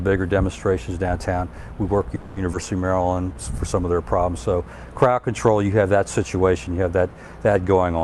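At 2.15 s the sound stalls in a call audio freeze until 2.38 s. The last sound is stretched into a fading buzz or hiss lasting about 210 ms. It never drops to silence. Then playback resumes exactly where it stopped, so nothing is lost. A gap has simply been inserted. The likely cause is packets held up on the network, which left the jitter buffer empty with nothing new to play.

A skip ahead follows at 2.52 s, running to 2.55 s. Playback jumps forward with almost no gap. Roughly 70 ms of sound is missing. The material on either side is butted together nearly directly, which gives a small abrupt lurch. This fits a stretch being dropped while later audio was already queued. The jump pulls the delay back down by about 70 ms.

From 2.88 s to 3.35 s comes a jitter buffer slow-down. The sound plays at about 83% speed, yet the pitch does not drop. Sounds are drawn out. The receiver repeated single pitch periods or bits of pauses many times in a row. 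That padding adds about 91 ms, building a reserve in the buffer.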